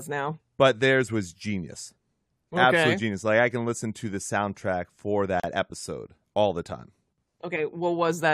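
Right after "to the soundtrack for", at 5.40 to 5.44 s, there's a gap at a join of encoded pieces: two separately encoded chunks were butted together untrimmed, leaving encoder delay and end padding. It's a 36 ms hole before "episode all the time" picks up.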